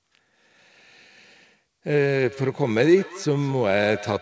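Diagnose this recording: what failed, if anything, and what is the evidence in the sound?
Call processing failed with feedback echo between two devices, each replaying the other's microphone uncancelled. From 2.26 s, sound recurs roughly every fifth of a second, about 17 dB down.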